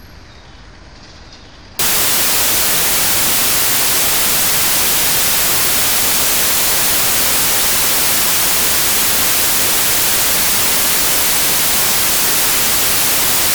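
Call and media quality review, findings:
Wrong sample width from 1.79 s to end of clip. Loud broadband noise with the original sound buried underneath. Playback slowed to about two thirds speed, pitch dropped to match. Probable component: decoder or format negotiation. Packed 24-bit integer data read as 16-bit integer. Samples built from mismatched byte pairs, so only some keep the true top bits. Three bytes become 1.5 samples, hence 0.667x speed.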